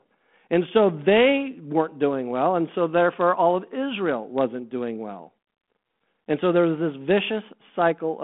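Speech, with nothing technically wrong to report.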